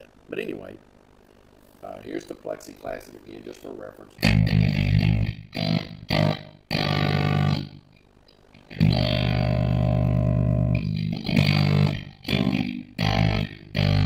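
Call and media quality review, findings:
Overlap-add ripple, whole clip. Level pumps at around 50 Hz, heard as rough, robotic tremolo. Depth about 60 dB, near-full gating each cycle. Probable component: frame-based processing stage at resynthesis. Mechanism: windowed frames rejoined with overlap not summing to constant gain. Gain dips once per frame. Rate points to a 20 ms frame hop.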